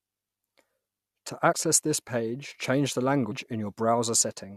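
At 1.51–1.53 s, just before "this page change the", and again at 3.31 s, just after it, compressed frames are skipped. About 70 ms and then about 150 ms of speech go missing, and the audio jumps ahead by whole 21.3 ms frames.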